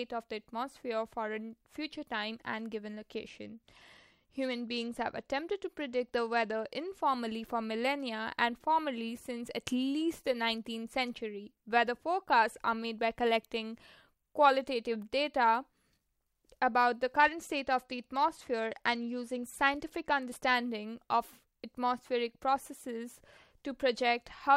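Speech with two Bluetooth SBC bit pool drops, 3.15–7.02 s and 17.14–20.54 s: treble dulls and gritty quantisation noise rises, fitting a fall from bit pool 28 to 13 (about 102 kbps). Unlike a plain low-pass, the grit accompanies the dulling, and both recover together.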